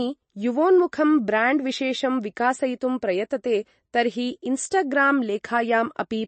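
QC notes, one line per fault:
Throughout, MP3 compression: the speech has a watery, swirly texture with a hard ceiling at 8.3 kHz and nothing above it, so the s sounds come out dull and metallic and chirpy. That's likely a low-bitrate MP3 encode. Short on bits, the encoder chops the treble at a fixed point and drops the weaker frequency lines, which flicker on and off frame to frame. The level of damage fits something around 34 kbps.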